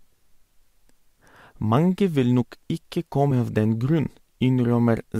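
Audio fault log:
3.30 s damaged data in a compressed stream: corrupted bytes made the decoder misread a frame and resync, leaving a brief glitch in the speech.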